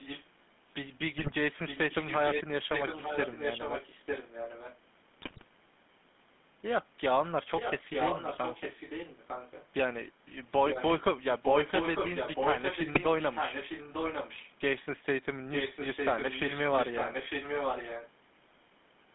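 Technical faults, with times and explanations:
Throughout, GSM full-rate codec: the speech is plainly buzzy and gravelly, confined to roughly 150 Hz to 3.5 kHz, which fits the 13 kbps full-rate codec. The encoder models the vocal tract and drives it with a sparse, regularly spaced pulse excitation, so fine detail in the voice is replaced by a coarse buzz. Unlike simple band-limiting, which only dulls the sound, this roughness sits inside the passband and stays steady from start to end.
1.18–1.33 s, 5.22–5.44 s and 12.94–13.01 s, GSM bit errors: each burst breaks the voice into squawks, pops and gargling for a fraction of a second. Corrupted filter, pitch or gain parameters make the decoder warp the spectrum or jump in level for a short run of 20 ms frames, with the longest burst at 5.22 s. A dropped packet leaves a gap or a smoothed repeat, but these bursts produce wrong, harsh sound that was never in the original.
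0.00–0.25 s, 1.67–2.44 s, 2.71–4.79 s, 7.56–9.67 s, 10.67–11.03 s, 11.41–14.51 s and 15.52–18.10 s, echo leak: a copy of the voice returns about 0.9 s late. It is about 10 dB below the speech in the first stretch and about 5 dB below in the rest. The likely cause is a loudspeaker on one side whose echo canceller let part of the microphone pickup back into the call. The fixed 0.9 s delay and distinct repeated speech separate it from room reverberation, which blurs the sound without a clean delayed copy.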